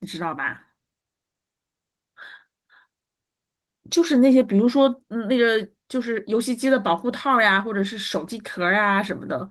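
Nothing stood out on listening to this speech recording.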